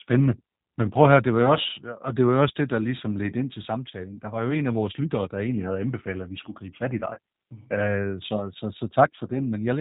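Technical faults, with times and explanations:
throughout: G.729 codec. Speech sounds rough and slightly synthetic with nothing above 4 kHz, consistent with an 8 kbit/s model-based codec rebuilding the voice from filter and pulses.
7.14 to 7.19 s: VoIP packet loss concealed by the speech codec. A brief buzzy or noisy, fading smear where about 30 ms went missing, probably one packet, extrapolated from the preceding pitch and filter.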